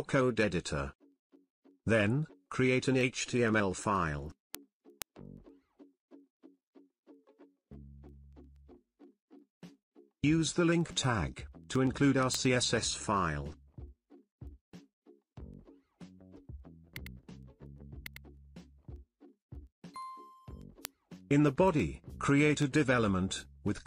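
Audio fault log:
0.18–23.81 s, word clock ticks: sharp clicks recur about every tenth of a second, around two hundred in all. The receiving device runs on its own clock, off from the sender's by something on the order of 200 parts per million. Each time the two clocks drift a sample apart, one sample is dropped or repeated and the waveform jumps. On a spectrogram these appear as evenly spaced thin vertical broadband lines. The waveform shows single-sample steps.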